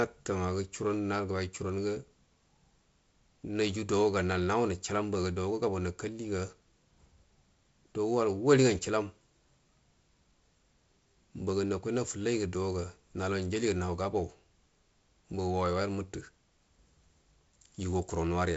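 No technical fault can be heard in this speech recording. It has been carried through G.722 wideband telephone coding at 48 kbit/s, which leaves nothing above 7.7 kHz and adds a light coding hiss that is slightly thicker in the lower band at this rate.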